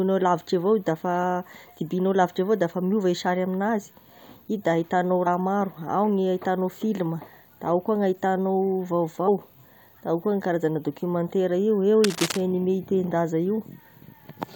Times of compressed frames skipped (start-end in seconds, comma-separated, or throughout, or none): 5.26, 7.20, 9.27